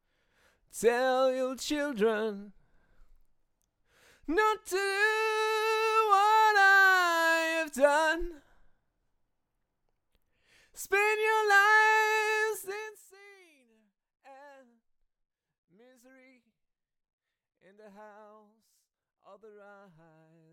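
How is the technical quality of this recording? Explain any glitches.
One glitch is audible, a stepped level drop partway through.

Zipper noise, 12.63–13.14 s: the level falls about 25 dB in unsmoothed steps of about 2 dB, some 30 a second, each step clicking audibly.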